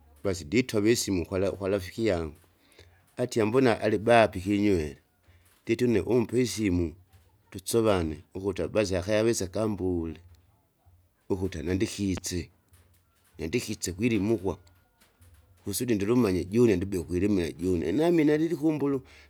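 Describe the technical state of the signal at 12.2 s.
Right at that spot there's a loud pop, a single sharp click running from about 12.17 to 12.20 s, so roughly 30 ms long and sitting well above the level of the speech, something like 10 dB over it. It sounds like a brief electrical pulse got into the signal path, most likely from a connector, a switch or a bit of static discharge, and the circuitry downstream turned that jolt into a short, hard thump. The speech itself carries on underneath without a break.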